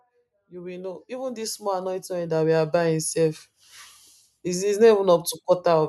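From 0.49 s to 3.08 s the automatic gain control is rising: it judged the speech input too quiet and pushed its gain up by about 13 dB over roughly two and a half seconds, so the voice and background noise swell together.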